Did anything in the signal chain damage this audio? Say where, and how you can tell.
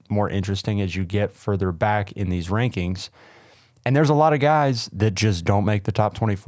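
No, no stage in the chain damaged this speech.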